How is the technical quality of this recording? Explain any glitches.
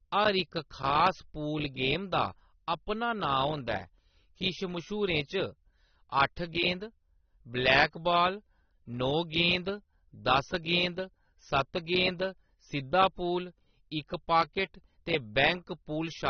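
The quality's held back by plainly audible compression damage all the way through. Nothing comes through above 6.3 kHz, so the speech sounds dull, with a smeared, warbly fizz on sibilants. That's likely AAC compression, AAC-LC starved of bits, which fits a bitrate around 24 kbps, so it drops the top end and thins the remaining bands.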